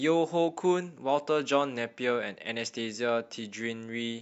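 No technical fault can be heard anywhere in this speech recording; the signal stays continuous and intact throughout.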